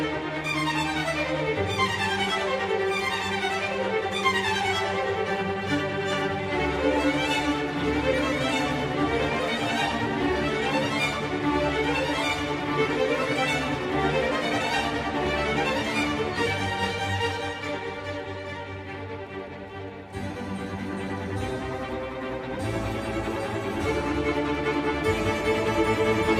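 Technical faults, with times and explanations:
No technical faults can be heard anywhere in the clip. Nothing in the signal path stands out as needing comment.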